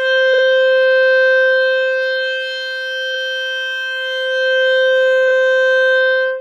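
The music stutters three times from repeated frames. At 0.33 s, a 46.4 ms slice plays twice more, adding about 93 ms. At 3.14 s, a 23.2 ms slice repeats once. At 5.27 s, a 23.2 ms slice plays twice more, adding 46.4 ms. In each case, compressed frames were sent or written again, and the decoder replayed them. The 23.2 ms unit fits 1024-sample frames at 44.1 kHz. Each repeat jumps back, so the same fraction of a second is heard again.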